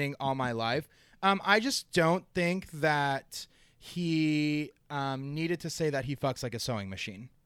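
Listening closely to the speech, nothing stood out as a technical fault at any point.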